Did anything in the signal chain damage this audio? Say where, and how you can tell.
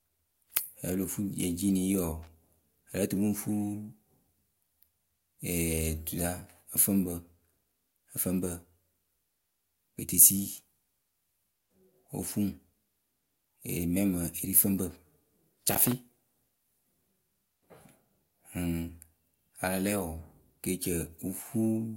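Yes: loose connector crackle in the analogue wiring, brief bursts at 2.23–2.27 s and 15.71–15.92 s, where an intermittent contact chops the speech into irregular scratching.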